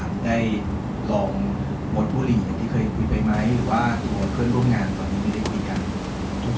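No technical faults can be heard in this speech.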